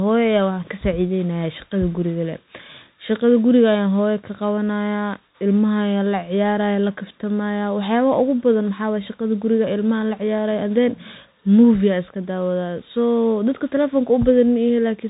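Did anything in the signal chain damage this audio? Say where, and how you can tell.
Yes: the Bluetooth CVSD headset codec damages the whole speech clip. Nothing passes above 3.8 kHz, s sounds turn scratchy, and a granular hiss sits under everything, unlike a plain band-limit filter, which stays clean.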